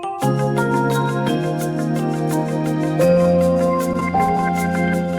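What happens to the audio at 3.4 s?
It drags and stutters, part of repeated stalls (stutter) from 3.07 to 4.45 s, where late packets emptied the jitter buffer and gaps were bridged.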